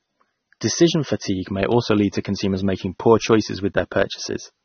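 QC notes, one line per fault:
Throughout, AAC compression: dull, smeared sound cut off at 6.3 kHz, a hard flat spectrogram ceiling; fits an encoder starved near 24 kbps AAC-LC, likely.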